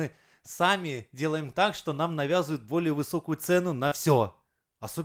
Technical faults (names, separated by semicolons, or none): lost packet rebuilt from error correction; short concealed packet loss